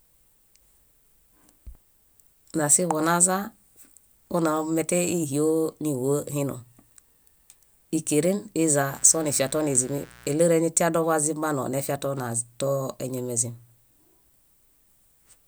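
Mains buzz runs from 8.86 to 10.36 s, just before "eñatia dobazimbanoo nefia too". Switching spikes from a 60 Hz supply leaked in twice per cycle, giving a raspy buzz rich in harmonics that sits roughly 25 dB below the speech.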